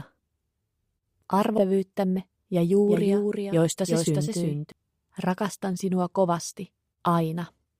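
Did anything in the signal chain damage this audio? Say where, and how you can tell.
Yes. At 1.57 to 1.59 s the sound jumps forward with no gap, as if about 0.7 s of material simply vanished and the two sides were butted together. This is a skip ahead at the network and jitter-buffer stage. Audio that was already queued was discarded, either lost in transit or dropped when the buffer overflowed. Playback then resumed at later audio, so the delay shortened by the same amount in one step.

From 2.17 to 2.45 s the sound hurries along at about 113% speed with its pitch unchanged. That pairing identifies a jitter buffer speed-up. After late packets arrived in a bunch, the receiver's buffer held more than its target depth. To pull latency back down it cut out many short pitch-period-sized slices in quick succession, about 50 ms in total across that stretch. This compresses time without any resampling.

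From 2.88 to 4.72 s a second, full-band copy of the sound trails the original by a fixed 0.4 s or so, about 5 dB quieter. It appears and disappears abruptly, with no decay or room colour. That rules out an echo or reverb and marks a doubled audio track. The likely cause is the same signal being captured a second time through a slower path, or two misaligned copies left stacked in an edit.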